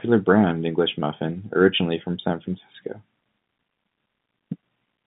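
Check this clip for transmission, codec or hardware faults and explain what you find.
No transmission, codec or hardware faults can be heard in this speech clip. It comes through G.711 telephone coding, so the band runs only from about 150 Hz to 3.7 kHz, with any trace of the format's level-following quantisation noise at most faint.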